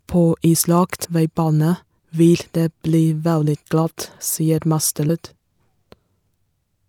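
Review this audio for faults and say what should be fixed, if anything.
At 1.03 to 1.05 s and again at 5.08 s the speech jumps forward with a short smeared blip. These are compressed frames skipped: around a tenth of a second goes missing each time, which fits four dropped 26.1 ms frames overlapping at the join. Keep the file intact in transfer and storage, and have the decoder conceal damaged frames instead of discarding them.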